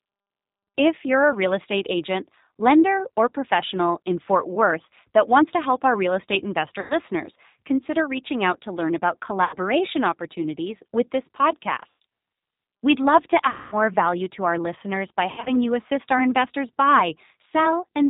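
Throughout, the G.729 codec band-limits the speech at 4 kHz and leaves it rough and synthetic; a spectrogram shows nothing above 4 kHz and smeared harmonics. VoIP packet loss concealed by the speech codec appears at 6.80 s after "help our real estate", 9.45 s after "out to learn about", 11.90 s, 13.50 s (about 220 ms lost) and 15.30 s after "to our listeners by". Each time the decoder stretches its last pitch and filter into a fading buzzy tone or coloured noise, which shows as a flat, decaying stretch.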